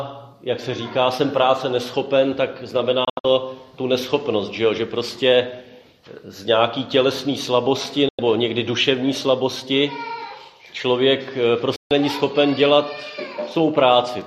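Digital broadcast dropouts hit at 3.05–3.25 s (several short holes, longest about 72 ms), 8.09–8.19 s and 11.76–11.91 s. The receiver lost good frames and muted with a quick fade, so that audio's gone.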